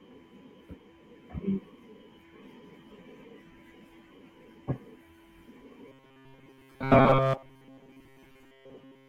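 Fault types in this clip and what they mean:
Robotic sound from repeated short buffers: From 5.88 s to the end of the speech at 9.09 s, the sound becomes a stiff, metallic buzz pitched at 134 Hz. It still loosely tracks the words. The likely cause is audio arriving too slowly, so playback keeps looping its last short slice. That slice would be about 7.5 ms long, which matches the buzz pitch. Most of the sound in this stretch is repetition, and the real audio in between is lost.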